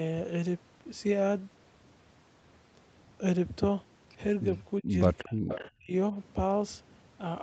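From 4.81 to 4.96 s the speech is pushed down by about 30 dB, most likely because the echo canceller heard both sides talking at once and, unable to tell the near talker from the loudspeaker echo, turned everything down. This is speech suppressed in double talk, and it sounds like a short hole in the audio, roughly 150 ms long. It recurs at 5.23 to 5.39 s and 5.79 to 5.92 s, each time dipping by about 25 dB.

Between those last two dips, from 5.48 to 5.71 s, an echo leak appears. One side's echo canceller likely failed to remove everything its microphone picked up from the loudspeaker, and the leftover was sent back. The result is a faint copy of the speech trailing about 0.37 s behind the original, roughly 10 dB quieter. It comes through as a brief, ghostly scrap laid over the live audio.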